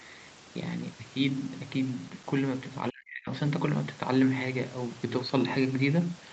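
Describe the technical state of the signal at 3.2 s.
At 3.2 s the speech is deep inside a dip from 2.9 to 3.3 s. It falls by roughly 40 dB and nearly vanishes. This is likely speech suppressed in double talk. The echo canceller mistook overlapping talk for echo and turned everything down.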